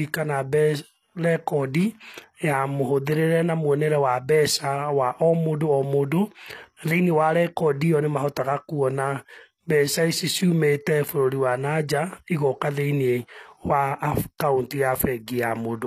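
The speech was likely squeezed through HE-AAC compression for its whole length, at a rate that sounds like around 24 kbps. At that rate only the lower spectrum is actually coded, and the top end is synthesised by spectral band replication, which copies lower bands upward under a coarse envelope. The treble stays bright but isn't the original, so its harmonics don't line up with those below, and s sounds come out plainly gritty, metallic or lisping throughout.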